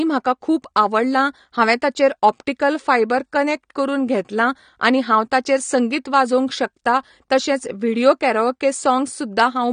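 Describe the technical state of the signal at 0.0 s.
Right from 0.0 s and through the whole clip, the speech carries AAC compression damage, likely from AAC-LC at a low bitrate, something like 32 kbps. There's nothing above 9.7 kHz, so it sounds dull, with a smeared, warbly fizz on sibilants.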